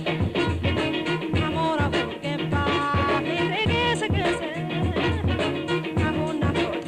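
No technical faults can be heard anywhere here.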